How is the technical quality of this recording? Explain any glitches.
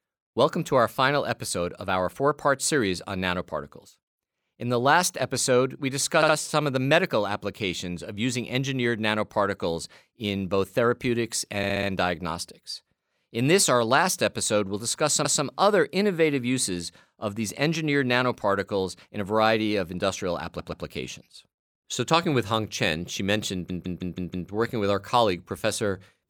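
The speech stutters five times because of repeated frames. A run of compressed frames was stored or sent more than once, so the decoder replays the same slice of audio. At 6.22 to 6.35 s a 64 ms block plays twice more. At 11.63 to 11.89 s, after "nanoparticles in both therapeutics", a 64 ms block repeats four extra times. At 15.25 to 15.44 s a 192 ms block repeats once. At 20.59 to 20.85 s, after "a variety of industrial", a 128 ms block plays twice more. The worst is at 23.70 to 24.50 s, between "she mentioned" and "working with our", where a 160 ms block repeats five times and adds 0.8 s.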